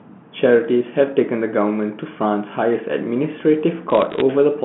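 From 3.9 to 4.21 s, bit errors on a digital phone line break through as a short burst of crackle laid over the speech. On this G.711 telephone path, with its band ending near 3.4 kHz, each flipped bit corrupts a single logarithmic sample. When the sign or a high-order bit is hit, that sample jumps and produces a sharp tick. Roughly a few bits in a thousand are wrong. This differs from packet loss or dropouts because nothing goes missing: the speech runs on unbroken beneath the isolated clicks.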